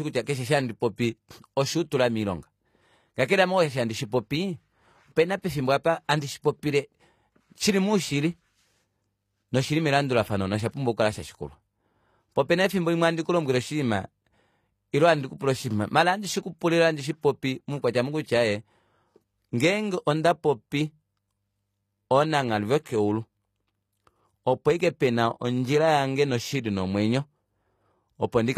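Throughout the speech, the audio was likely passed through HE-AAC compression at a low bitrate, around 24 kbps. The treble is rebuilt from copied lower bands rather than coded, nothing remains above 14.9 kHz, and s sounds come out gritty and metallic.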